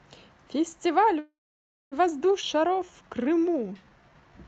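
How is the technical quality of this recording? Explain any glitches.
The recording has three timing glitches, over call-style audio whose highs stop at about 8 kHz, as the Opus codec path produces.

From 1.19 to 1.94 s there is a call audio freeze: the last sound fades into about 0.59 s of silence, inserting roughly 0.72 s, likely from delayed packets. Unlike a skip, nothing is lost.

At 2.42 to 2.44 s a skip ahead drops roughly 0.3 s, joining both sides almost seamlessly. Unlike a freeze, there is no gap, only missing sound.

From 2.55 to 4.39 s a jitter buffer slow-down repeats pitch periods, playing at 86% speed and adding 257 ms. Pitch stays unchanged, unlike a tape slowdown.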